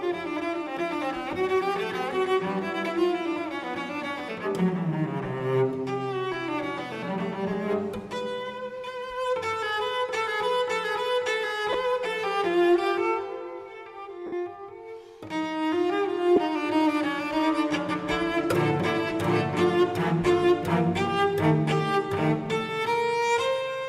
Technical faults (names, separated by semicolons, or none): lost LE Audio frames